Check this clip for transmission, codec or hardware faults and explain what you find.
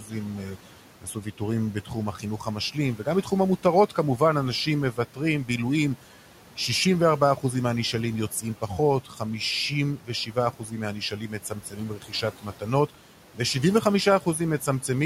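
The problems come from the noise suppressor, which is removing too much. Noise suppressor artifacts are present throughout: the suppressor lowers steady-noise bands by about 12 dB frame by frame, so the room noise sinks between phrases.

Speech cut by the noise suppressor occurs at 0.0–4.21 s, 4.93–5.49 s, 8.31–9.21 s and 9.97–14.89 s. The suppressor mistakes quiet speech for noise and pulls soft consonants and endings down by about 10 to 13 dB, so they sound swallowed, most extensively in the first and last stretches.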